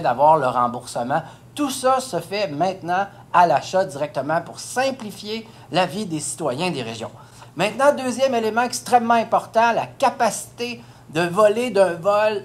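No technical faults are audible.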